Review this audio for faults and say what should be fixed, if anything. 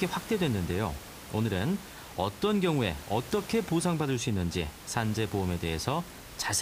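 Nothing stood out on listening to this speech, so there is nothing here that needs fixing.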